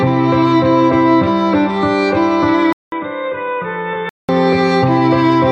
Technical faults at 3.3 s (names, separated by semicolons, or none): input switched to a poorer device